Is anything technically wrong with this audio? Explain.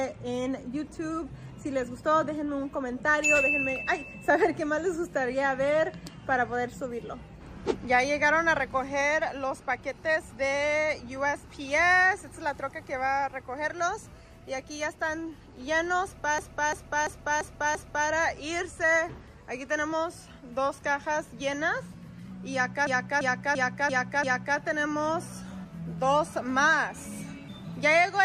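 Yes, there's a system hang loop at 16.38 to 18.09 s and again at 22.87 to 24.58 s. The system stalled while the hardware kept replaying one 341 ms buffer, which fits a 16384-sample buffer, five times over, so you hear a choppy stutter repeating about 2.9 times a second.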